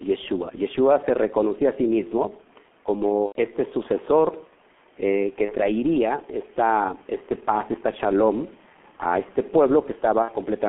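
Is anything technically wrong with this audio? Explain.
Yes. The whole clip runs through the G.723.1 codec, heavily damaged: the speech is muffled, hoarse and smeared, held to roughly 200 Hz–3.4 kHz. That fits a very low rate around 6 kbit/s, where the coarse 30 ms frames blur consonants.

There's also VoIP packet loss concealed by the speech codec, at 3.26–3.37 s just before "este sucesor eh que", 5.45–5.54 s right after "este sucesor eh que", and 10.22–10.31 s. The decoder fills each gap by stretching the last sound into a fading buzzy tone or coloured noise, which fits roughly three, one and two lost frames. The faint room noise, about 33 dB under the speech, is just part of the recording.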